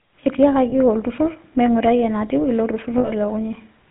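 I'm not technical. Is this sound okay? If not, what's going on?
No. The whole recording has passed through the GSM full-rate codec, an early mobile-phone system. It rebuilds the voice from a rough model, so everything sounds buzzy and gravelly. Nothing above 4 kHz survives, so the sound is dull and narrow.

There are also lost GSM frames. At 0.70 to 0.73 s, a tiny piece of sound went missing. From 2.98 to 3.11 s, a longer piece did. The phone system filled each gap by repeating the last good sound. That gives a brief, harsh, metallic ring.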